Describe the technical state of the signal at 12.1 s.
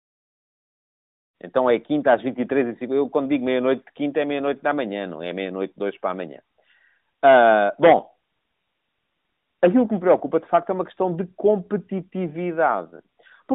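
At 12.1 s the signal is intact, with no fault to be heard at that moment.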